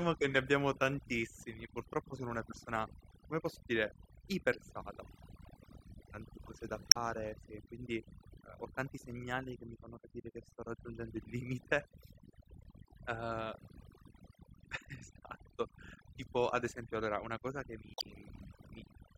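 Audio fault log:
throughout: overdone noise removal. Bands near the noise floor are cut away, leaving near-silent gaps with twinkling specks, unlike broadband hiss or muffling.
4.51 to 4.55 s, 6.89 to 6.97 s, 12.62 to 12.66 s, 17.92 to 18.04 s: damaged data in a compressed stream. Corrupt frames make the decoder lose sync, producing brief glitches.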